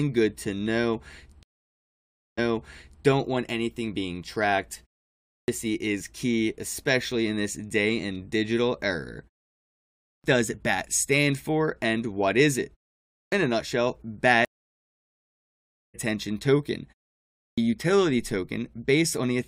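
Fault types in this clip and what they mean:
stream reconnect: the link dropped and decoding restarted mid-stream. A 0.95 s gap after "good to know" replays 0.67 s, and a 1.49 s gap after "a nutshell" skips about a second.
clipped start after a pause: the output device sleeps in pauses and wakes late, cutting 0.28 to 0.32 s from onsets at 5.20, 9.93, 13.02 and 17.25 s.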